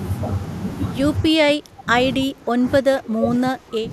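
From 1.3 to 1.88 s the speech sinks sharply, by around 25 dB at its lowest. From 2.26 s to 3.92 s it happens again, a little less deeply, at around 20 dB, and for longer. This is speech suppressed in double talk. The likely cause is both ends talking at once. The echo canceller then mistook the local talker for loudspeaker echo and pulled the level down.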